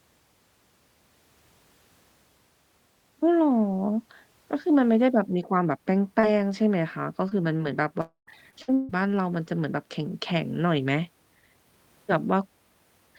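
A speech recording with packet trouble clustered between 6 and 9 seconds. Short concealed packet loss comes first: around 40 ms of audio failed to reach the decoder at 6.19 to 6.25 s, and about 20 ms each at 7.29 and 7.57 s. The receiver bridged each hole by extending the preceding sound, so each is heard as a brief smear or wobble in the speech. From 8.01 to 8.29 s comes a long network dropout: the receiver continues the last sound for a stretch, after which about 130 ms is simply silent, and the voice returns with roughly a quarter second missing, likely because the network delivered no audio for that span. Repeated packet loss then produces robotic sound from 8.51 to 8.94 s: four successive gaps, the longest 150 ms, were each patched from the previous audio, so more than half that stretch is synthesised and sounds choppy.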